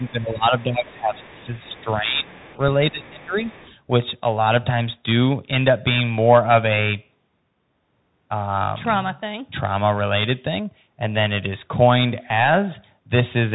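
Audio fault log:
Throughout: Bluetooth CVSD headset codec. The sound stops near 3.8 kHz, so it is narrowband and dull. The codec sends one bit per sample, saying only up or down, with an adaptive step size. The damage is plainly audible. Loud high sounds outrun the step and distort. S sounds turn scratchy. A granular hiss sits under the speech. The character fits a 64 kbps CVSD link. The call's microphone high-pass trims only the deepest bass.
0.00 to 1.56 s and 1.76 to 3.57 s: speech suppressed in double talk. The talker's level dips and thins in patches, about 1.5 s in total in each span. The deepest drop is about 15 dB in the first span and about 20 dB in the second. The likely cause is the echo canceller. Both sides spoke at once, and it could not tell the talker from the loudspeaker echo. So it turned both down.
0.07 to 0.11 s, 1.18 to 1.84 s, 2.39 to 2.58 s, 2.91 to 3.06 s and 3.41 to 3.75 s: other side's voice leaking through. 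A faint second voice appears in short scraps. It sits around 30 dB below the talker, and nearer 35 dB down at 2.91 s. The likely cause is the far end playing on a loudspeaker into the microphone. The echo canceller did not remove all of it, so remnants slip past.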